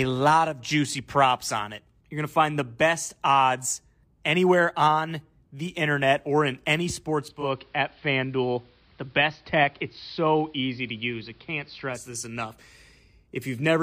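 After "internet or in any", from 7.2 s to 12.2 s, the digital radio blends to analogue AM over 345 ms. Treble vanishes, level dips about 1 dB, and faint hiss appears. A spectrogram shows a hard ceiling with a noise floor.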